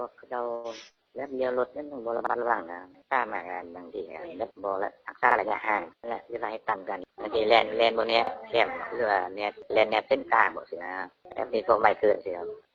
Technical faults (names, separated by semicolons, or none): short stall from a late packet; overlapping chunks; jitter buffer speed-up